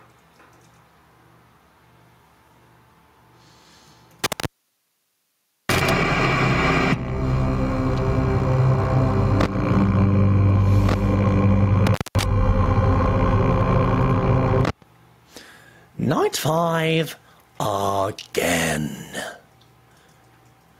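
The audio shows gain pumping from start to finish: the background swells in the gaps and drops by about 10 dB under each loud sound, likely from gain set far too high with a fast limiter clamping it. On a waveform the peaks look flattened and the quiet stretches balloon upward. Intermittent contact cuts the sound at 4.24 to 5.90 s, open for about 1.24 s, and at 11.86 to 12.23 s, open for about 0.21 s. Each dropout has crackle at its edges and faint hiss inside. On a spectrogram these show as near-empty gaps framed by thin vertical broadband clicks.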